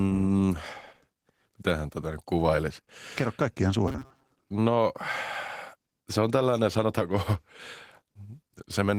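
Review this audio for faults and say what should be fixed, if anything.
Opus voice compression, throughout: the whole clip carries plainly audible coding damage, with coarse, slightly hoarse speech that points to a low bitrate of around 16 kbps in hybrid mode. Prevent it by giving the encoder a higher bitrate.

Robotic sound from repeated short buffers, 3.88 to 4.31 s: a rigid metallic buzz at 133 Hz replaces most of the real audio. This is likely caused by a roughly 7.5 ms block being repeated. Prevent it by keeping the audio buffer fed on time.

Drift correction step, 7.01 to 7.59 s, just after "se on tällainen": playback slows by 5.4% and drops about 96 cents, nearly a semitone, then snaps back. This is likely a one-step clock-matching rate change. Prevent it by applying drift correction gradually.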